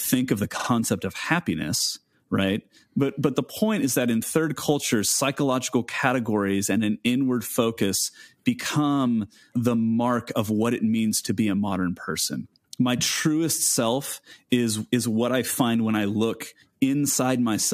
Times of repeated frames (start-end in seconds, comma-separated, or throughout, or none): 0.58-0.68